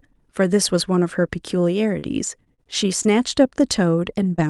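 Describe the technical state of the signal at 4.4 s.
Around 4.4 s there is a short concealed packet loss, running from 4.36 to 4.40 s. Roughly 20 ms of the speech never reached the decoder in time, and the receiver covered the gap. It extended the last stretch of sound, following its pitch if voiced or using shaped noise if not. Then it crossfaded back into the real signal. The result is a brief smear or wobble, and a short consonant there may drop out. The call codec's band limit, near 12 kHz, applies through it.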